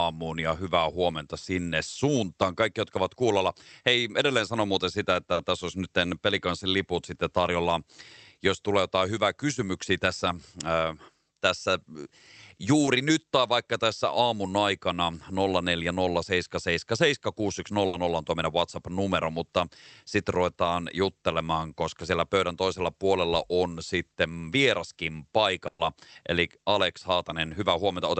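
At 5.33 to 5.39 s and again at 12.85 to 12.89 s there is short concealed packet loss. About 40 ms, then 20 ms, of audio arrived too late to decode. The receiver extended the preceding sound to cover each gap. Both are heard as a brief smear or wobble.

At 17.87 to 17.95 s and 25.67 to 25.81 s, a burst of packet loss removes 60 ms, then 120 ms. The last sound is stretched and fades as a held buzz or hiss, with no true silence in the second. Then the audio picks up further on, with that stretch missing.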